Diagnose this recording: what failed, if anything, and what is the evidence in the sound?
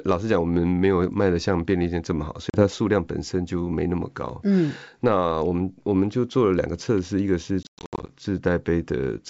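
Network packet loss on an ADPCM call. Hard silent holes at 2.50–2.64 s, then scattered gaps over 7.63–8.15 s. Each loss desyncs the decoder's predictor.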